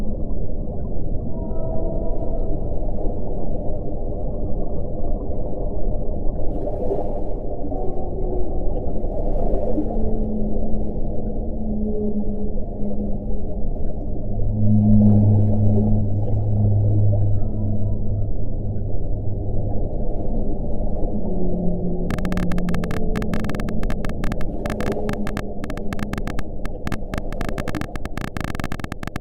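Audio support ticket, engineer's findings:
Probable interference pickup or a faulty connection, likely, injecting repeated pulses. Train of clicks from 22.1 s to 29.2 s: about 14 per second at uneven spacing, around a hundred in all, ticking roughly 10 dB above the sound.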